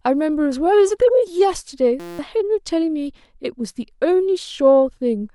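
From 2.00 to 2.19 s the speech gives way to a flat, steady buzz at 172 Hz. That's a system hang loop: the driver stalled while the hardware kept replaying one 5.8 ms slice, which fits a 256-sample buffer, so roughly a fifth of a second is lost.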